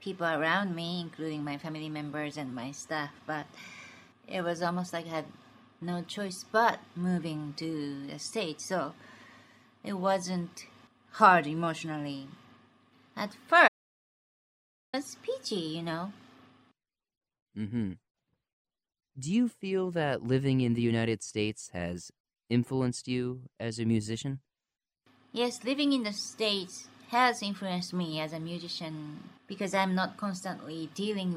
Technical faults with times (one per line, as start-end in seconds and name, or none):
13.68-14.93 audio dropout to silence